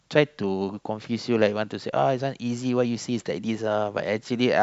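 No technical faults are audible.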